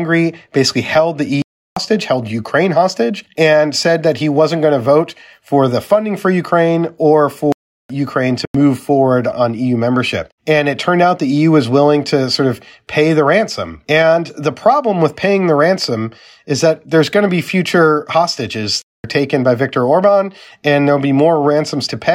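The program likely failed repeatedly to fill its output buffer in time, so whole blocks of speech were replaced by zeros, giving a block of digital silence at 1.42–1.77 s, 7.52–7.90 s, 8.45–8.55 s and 18.82–19.04 s. The 0.37 s gap fits a 16,384-sample block and the 93 ms one a 4,096-sample block. Each cuts out abruptly: the shortest as a short hole, the longer ones as distinct holes.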